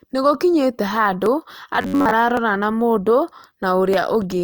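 Dropped samples at 1.26 s give a single sharp click, likely from under a millisecond of audio going missing so the waveform jumps. Robotic sound from repeated short buffers follows from 1.76 to 2.11 s: the speech becomes a rigid metallic buzz near 94 Hz, likely because a buffer of about 11 ms was replayed while most of the real audio was skipped. Further dropped-sample clicks at 2.37 s and 3.94 s likely come from the same brief losses.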